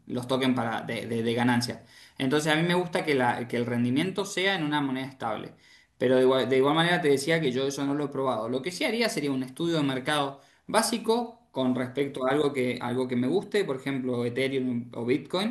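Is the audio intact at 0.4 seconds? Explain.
Yes, at 0.4 s the speech plays cleanly, with no dropout, click, distortion or other fault at that point.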